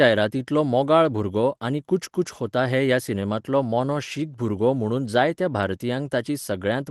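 Speech, with no technical fault to point to. It has gone through a WebRTC call path, heard as the top end stopping at 12 kHz, which fits an Opus codec running at about 20 kbps.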